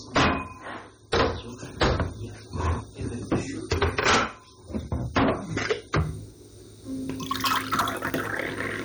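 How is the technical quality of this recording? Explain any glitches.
Poor, with two clear faults.

Hard clipping runs through the whole recording as a harsh, gritty fuzz on every loud moment rather than an occasional crackle. The signal was driven about 28 dB past what some stage in the chain could pass, so its peaks were sliced flat. Roughly one sample in twenty sits on that ceiling, and those squared-off tops scatter harmonics high up the spectrum, which is where the rasp comes from.

An adaptive stream starting at a low bitrate shapes the first 6.0 s. From 0.0 s the audio sounds dull and smeared, with thin or watery treble and obvious codec swirl, consistent with MP3 at around 32 kbit/s. At 6.0 s the quality jumps without any gap, and the high end opens out to about 20.7 kHz, which fits a switch up to roughly 128 kbit/s once the player had measured the connection.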